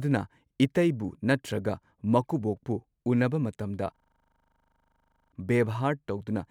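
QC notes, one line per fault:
3.96–5.32 s, system hang loop: the speech stops and one 40 ms slice of sound repeats exactly, cycling 25 times a second, which fits a stalled driver or system while the hardware kept replaying a ring buffer of about that length. The rapid identical repeats sound like a steady buzz at 25 Hz. On the waveform, identical 40 ms blocks tile the span. The spectrogram shows a frozen, striped pattern. About a second and a half of speech is lost.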